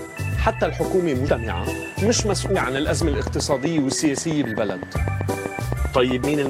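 The audio has compressed frames skipped at 1.28, 2.55, 5.02 to 5.04 and 6.23 s, each jumping ahead by roughly 40 to 150 ms of lost frames. A regular train of clicks at 7.73 per second runs from 2.07 to 6.47 s, peaking about 10 dB above the signal, likely from electrical interference or a faulty connection.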